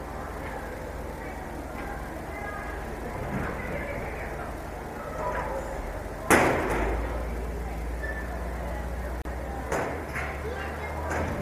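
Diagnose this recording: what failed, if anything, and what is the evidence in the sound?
Video or display buzz runs for the whole recording. A steady buzz based on 75 Hz, with hash above it, sits fairly high, roughly 10 dB below the programme. The failure is in the analogue wiring: a monitor or video cable running at a 75 Hz field rate is coupling its refresh energy into the audio path, through shared grounds or parallel cabling. The buzz is constant because the interference source never stops.

A gap at a join of encoded pieces appears at 9.22 s. The sound drops out for 35 ms, until 9.25 s, then picks up exactly where it left off, with slightly softened edges. This points to the codec and assembly stage. The audio was encoded in 10-second segments and concatenated without trimming, so the encoder's start-up delay and final-frame padding remain as dead air at the seam.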